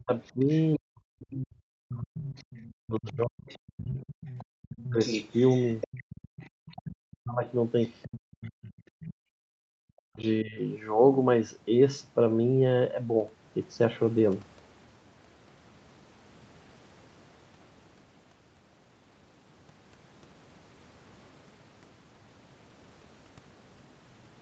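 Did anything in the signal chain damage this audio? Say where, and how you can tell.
Yes. In the call processing stage, the echo canceller likely mistook simultaneous talk for loudspeaker echo and turned the talker down. This is speech suppressed in double talk: from 0 to 4.99 s and 6.75 to 10.58 s the speech dips or breaks up, falling by roughly 40 dB.

The echo canceller also failed to remove all of the loudspeaker signal from the microphone, so the other side's voice leaks through. A faint second voice sits about 30 dB below the speech from 0.22 to 0.76 s, then a louder one about 15 dB down from 2.23 to 9.14 s, likely residual echo.

Background gated by the echo canceller: as the leaked voice ends at 9.14 s, the canceller clamps the microphone hard, and the room sound drops by about 40 dB until 9.2 s, a brief hole of under a tenth of a second.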